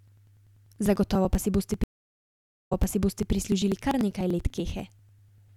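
From 0.08 s to 5.48 s there are periodic USB or driver dropouts: every 98 ms a background task stalls the audio path and roughly 2 ms of signal is skipped outright. The result is about forty evenly spaced ticks, heard only while sound is present.

At 1.84 s a stream reconnect begins. The connection drops, leaving 0.86 s of silence, then a fresh decoder picks up the stream 0.62 s earlier than where it broke off, so that stretch is heard twice. The restart fades in, and the disruption settles by 3.32 s.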